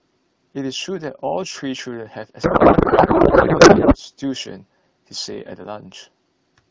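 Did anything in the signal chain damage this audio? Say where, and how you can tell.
Yes. Between 2.43 and 3.96 s the codec stage suffers a payload misread: the sending and receiving ends disagree on how the AMR bits are packed, which fits octet-aligned frames being parsed as bandwidth-efficient. Every field lands in the wrong place, so the decoder turns well-formed frames into garbled noise and warble that barely tracks the speech. Before and after that span, the AMR wideband decoding at 12.65 kbit/s sounds clear.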